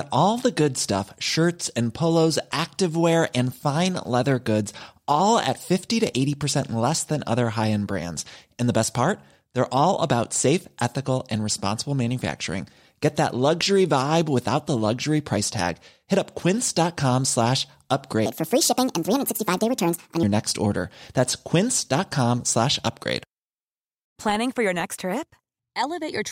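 From 18.26 to 20.23 s, a section at the wrong speed: the speech plays at 1.54 times its recorded rate, so it sounds rushed and raised in pitch by about seven semitones, giving a chipmunk-like, hurried quality. Because speed and pitch shift together and snap back at both boundaries, the likely cause is that this stretch was played out or resampled against the wrong clock rate, compressing about three seconds of speech into two.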